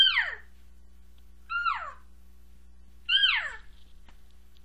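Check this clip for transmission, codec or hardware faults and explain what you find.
No transmission, codec or hardware faults can be heard in this clip.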